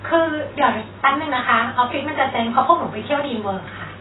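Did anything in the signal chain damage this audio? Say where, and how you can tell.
Yes, at the codec stage: throughout, the speech sounds heavily dull, smeared and fizzy on sibilants, pointing to likely AAC compression near 16 kbps, which starves high bands.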